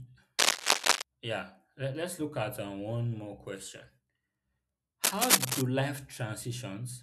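Between 0.39 and 1.02 s, and again from 5.03 to 5.62 s, cable scratch noise rides over the speech: dense, irregular bursts of scratching and rustling that sit well above the voice. The likely cause is a worn lead or connector being moved, its contact resistance fluctuating rapidly. The crackle is ragged and clustered over about 0.6 s each time, unlike isolated digital clicks or a steady hiss.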